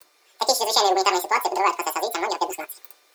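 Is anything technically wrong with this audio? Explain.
Yes. The audio is read two samples at a time (double speed) for the whole clip. The reader treats each pair of consecutive samples as a single frame, as if the data held two channels or samples twice as wide, so it moves through the speech at 2x speed. Everything is pitched up 12 semitones, a full octave, giving a chipmunk-like quality.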